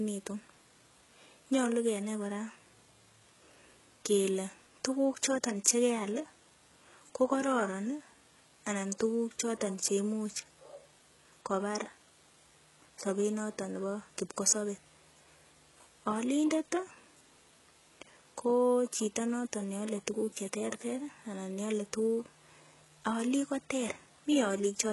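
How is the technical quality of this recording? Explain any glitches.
The recording is heavily compressed speech, with a gritty top end and one smeared attack.

Throughout, sibilants sound metallic and lispy, and nothing sits above 11.5 kHz. This is likely HE-AAC compression, which fits a very low bitrate around 12 kbps. It rebuilds the treble from copied lower bands, so the harmonics don't line up.

At 5.64 s, a hiss about 14 ms long comes just before a sharp attack and softens it. This is pre-echo: the codec spread noise sized for the loud onset across its whole block.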